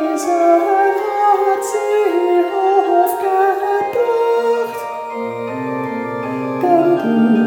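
Nothing in the audio stands out as a technical problem, so there's really nothing here to flag.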